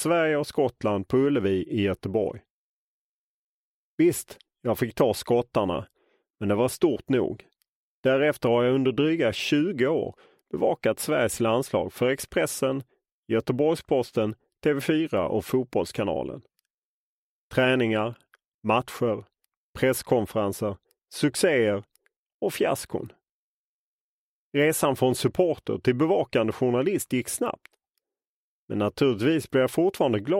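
Nothing here trips any alarms: there's no fault to point to anywhere in the clip, and it just runs on without a hitch.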